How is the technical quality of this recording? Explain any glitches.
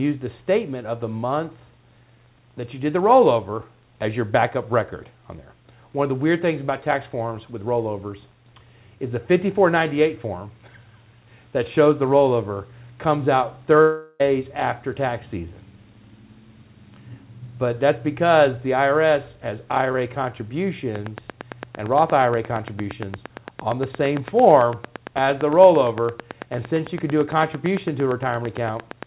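Two glitches stand out, over sound band-limited to 4 kHz, which fits a G.711 call path at 64 kbps.

Long network dropout, 13.82 to 14.22 s: the sound smears into a fading buzz for about 0.4 s, then resumes with that stretch missing. Lost packets were likely concealed.

Train of clicks, 20.96 s to the end: regular ticking at 8.8 per second, around 10 dB above the audio, likely from interference or a faulty connection.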